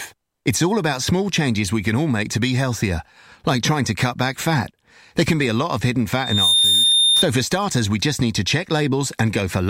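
After "a lot of hidden", from 6.13 to 7.25 s, loudspeaker feedback squeal rises at 3.6 kHz: the microphone re-amplifies its own loudspeaker until that tone swells over about a third of a second, ending louder than the speech. That growth sets it apart from a steady interference whistle. The speech resumes at "for starters we just".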